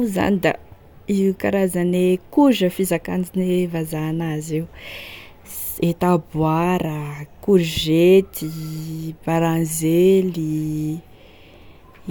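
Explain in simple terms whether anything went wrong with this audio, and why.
Nothing went wrong; no faults can be heard.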